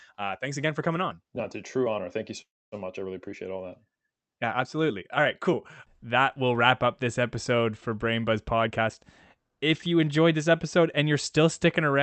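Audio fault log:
2.41–2.75 s call audio freeze: sound stalls, then goes quiet for about 0.26 s, likely from delayed packets draining the jitter buffer; resumes intact at "much I really appreciate".
8.67–11.43 s jitter buffer speed-up: pitch-period slices, roughly 0.3 s in total, are cut repeatedly to shrink excess buffered delay, so speech runs at 111% and sounds hurried.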